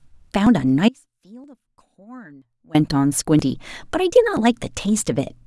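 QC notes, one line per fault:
0.47, 1.44, 2.42, 3.39 and 4.37 s, audio missing between chunks: The speech skips forward by a tiny amount at each of these points, roughly 20 ms gone each time, with the two sides butted together and no gap of silence. The skips recur almost exactly once a second, and that steady spacing is the giveaway. The likely cause is a recorder or processor handling the audio in 1-second chunks and dropping a sliver at each handover.
0.89 to 2.74 s, audio dropout to a faint residue: The speech cuts out abruptly and for nearly two seconds only a faint sound remains, about 25 dB below the normal signal level, before the speech returns just as suddenly. The hard edges at both ends distinguish this from a natural pause or a fade. The likely cause is the wanted signal being lost upstream while the path after the break stayed live.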